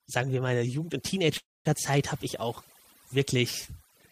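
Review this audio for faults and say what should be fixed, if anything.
Overdone noise removal runs through the whole speech clip: frequency bands near the noise estimate are pushed down or cut, leaving twinkling specks rather than a steady, even hiss.

A call audio freeze runs from 1.37 to 1.67 s, just before "habe ich auch". The last sound is carried on and then fades, with about 200 ms of silence. The likely cause is delayed packets emptying the jitter buffer. Unlike a dropout, nothing is lost: speech resumes where it stopped, about 278 ms late.

To prevent these, use gentler noise reduction settings and a larger or adaptive jitter buffer on the call path.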